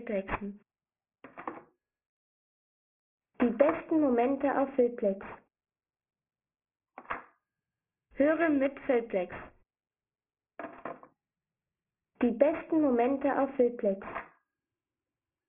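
Aliasing runs through the whole audio: content folds back below about 3 kHz as gritty, unrelated tones, not the clean dullness of filtering. The fold point fits resampling from 48 kHz to 6 kHz without an anti-alias filter.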